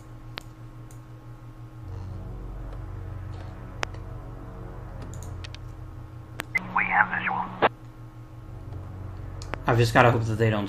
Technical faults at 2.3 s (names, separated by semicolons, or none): none